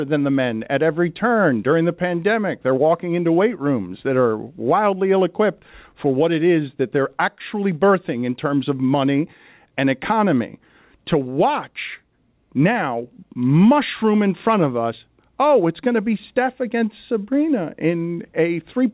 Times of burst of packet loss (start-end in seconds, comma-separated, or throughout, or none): none